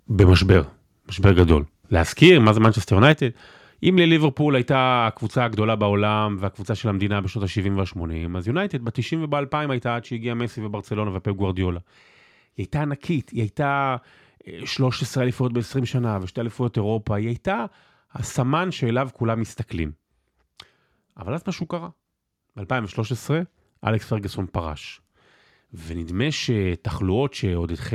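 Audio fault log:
0.19–0.55, 1.24–1.53, 2.22–2.68 and 3.03–3.05 s: microphone overload, with peaks driven about 1 to 4 dB past the converter's limit. Waveform tops are flattened, and the spectrogram shows bright broadband smears, likely from an input gain set too high.
3.12 s: microphone volume stepped down. Speech and background drop together by about 5 dB in one step, likely the call software reacting to the clipping. The waveform envelope shrinks abruptly, and the spectrogram darkens evenly across frequencies.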